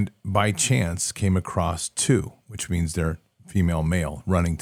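No audible technical faults anywhere in the speech; nothing to flag.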